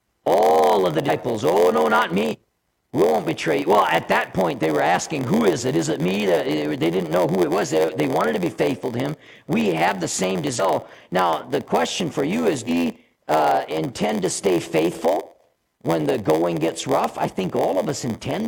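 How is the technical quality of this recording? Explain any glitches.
The technical quality is poor, with a constant buzz throughout and four audible jumps.

Throughout, a block size mismatch (padded) leaves a zero gap in each block, which fits a 512-sample read. This produces an 86.1 Hz buzz and playback at 0.938 speed with pitch about normal. A waveform shows regular dropouts, and a spectrogram shows vertical striping.

Compressed frames are skipped at 1.04, 2.28, 10.55 and 12.64 s. Missing 46.4 ms frames make the audio jump ahead by roughly 0.2, 0.15, 0.5 and 0.2 s.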